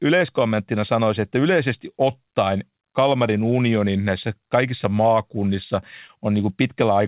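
Clock drift between sender and receiver runs through the whole recording: the sending side's clock runs roughly 4 percent slow against the receiver's, so the jitter buffer keeps draining instead of holding steady. To avoid running dry, the receiver has to keep stretching what it has, and the speech never settles into a perfectly even pace. Small timing hiccups turn up at irregular points rather than on any regular beat.

Repeated timing corrections run from 0.07 s to 6.94 s, where the receiver keeps inserting short repeated fragments to make up for the slow sender. All the edits go the same way, lengthening the audio, and together they add roughly a third of a second, so playback runs at about 96 percent speed. Each insertion is tiny, heard, if at all, as a slight stumble or an uneven tempo. Through the call path, the band stops at 4 kHz, which fits a G.711 mu-law link at 64 kbps.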